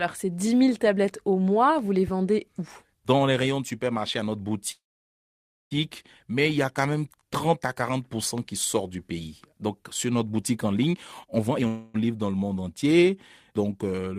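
A speech recording with two call audio freezes, a loud pop and a jitter buffer speed-up. From 4.71 to 5.73 s the sound stalls for about a second, a brief fading tail of the last sound followed by roughly 910 ms of silence, then resumes where it left off with nothing lost; the likely cause is delayed packets draining the jitter buffer. At 8.38–8.41 s, just before "qui sort du pays", a single sharp pop peaks about 5 dB above the speech, which continues beneath it, likely a voltage transient from a plug, switch or driver glitch. After "sur notre boutique en", from 10.92 to 11.67 s, the speech runs at 155% speed with unchanged pitch and sounds hurried: the receiver trimmed short pitch-period slices, around 0.4 s in total, to reduce accumulated buffer delay. A second freeze immediately follows at 11.67–11.96 s, before "livre dans le monde", where 268 ms is filled by a continuation of the last sound with no silence and nothing missing, likely another jitter buffer underrun.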